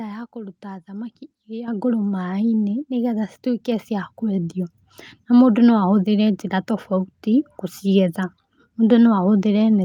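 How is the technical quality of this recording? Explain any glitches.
The recording has one clear glitch: a microphone volume stepped up at 1.68 s, right after "ya kũruta thamaki iria". At that instant the whole signal jumps by about 8 dB in a single step. The input gain on the capture device was raised abruptly, as call software does when it judges the microphone too quiet. Because the change happens before any processing, the speech and the background noise floor rise together and stay at the new, louder level.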